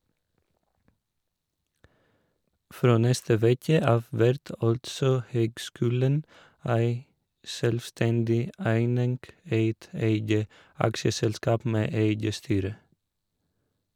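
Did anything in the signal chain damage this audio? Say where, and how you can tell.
No, nothing in the signal chain damaged this audio.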